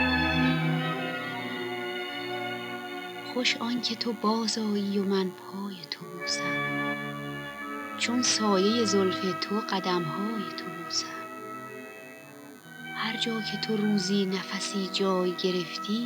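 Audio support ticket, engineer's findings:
Thin, steady buzz under the sound for the whole clip, sitting fairly low, roughly 25 dB down. DECT cordless phone buzz: a nearby handset or base bursting every 10 ms, rectified in the audio circuit, giving a 100 Hz tone with lots of harmonics.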